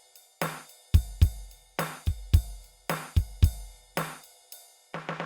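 Nothing goes wrong anywhere in this bit of music, so there's no technical fault to point to at any moment.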